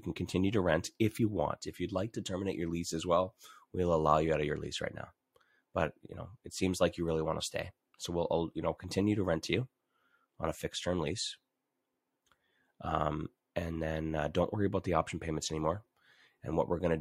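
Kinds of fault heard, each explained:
Compressed frames skipped: At 1.16 s the speech jumps forward. A short run of encoded audio never reaches the output, because that data is missing from the file or the decoder rejected it as damaged. What is lost is roughly a couple of frames, about 50 ms of speech. The gap is whole frames.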